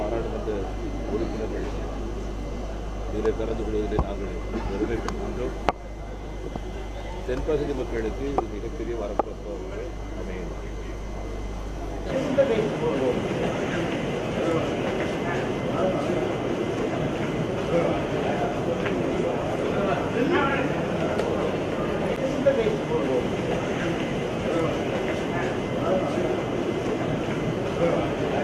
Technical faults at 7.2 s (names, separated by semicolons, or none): none